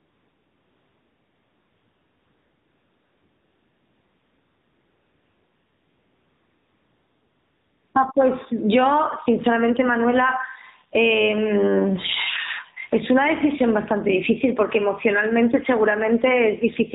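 From the start to 7.94 s there is AMR comfort noise. The phone treated this stretch as silence and sent no speech frames, so the receiver filled the gap with synthetic noise built from a rough level-and-spectrum description. What you hear is a smooth, unnaturally steady hiss in place of the real background. On a spectrogram it is a flat, featureless band below 4 kHz with no fine detail, and the waveform has an even, constant-amplitude texture.

Throughout the clip the level pumps, with a gain swing of around 25 dB. Loud and quiet passages sit squashed close together. This is likely a microphone gain set far too high, with a fast limiter or compressor clamping down on every peak. On the waveform loud and soft passages sit at similar levels.

Also throughout, the AMR narrowband mobile codec band-limits and reshapes the speech. Nothing above 4 kHz survives, so the sound is thin and telephone-like. 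The coding damage is plainly audible as a buzzy, synthetic edge, which fits a low mode of about 7.4 kbps. The codec's coarse vocal-tract model and sparse pulse excitation leave background detail smeared into a warble. A spectrogram shows a hard ceiling at 4 kHz, with blurred, blocky harmonics beneath it.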